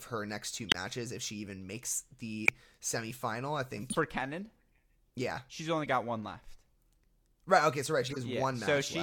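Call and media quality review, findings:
Corrupt frame decoded, five events: 0.69–0.75 s, 2.45–2.49 s, 3.90–3.96 s, 5.84–5.87 s, 8.07–8.17 s. Decoder played damaged compressed frames without concealment. Flipped bits misread gains and codes, putting energy at the wrong frequencies. Heard as short chirp or noise bursts across a few frames each, loudest at 0.69 s and 2.45 s, fainter later. First event also stretches timing by about 19 ms.

Bit error spike, two events: 1.83 s, 7.60 s. Single-sample flip in memory or on a digital link. Value jumps by a power of two and snaps back. Heard as one sharp, broadband tick unrelated to the speech, with no tail and no tonal character. Points to the transport or buffer path rather than the codec.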